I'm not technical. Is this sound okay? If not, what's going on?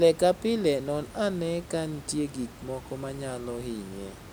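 Yes, nothing stood out on listening; the background noise of the room is part of the recording itself.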